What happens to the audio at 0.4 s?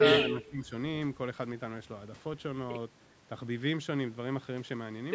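Speech suppressed in double talk covers 0.33 to 0.73 s, so 0.4 s falls inside it. The speech drops sharply, by roughly 20 dB at its deepest, for about 0.4 s before recovering. The likely cause is the call's echo canceller hearing both sides talking at once. Unable to tell the local talker from the loudspeaker echo, it pulled everything down together, taking the wanted speech with it.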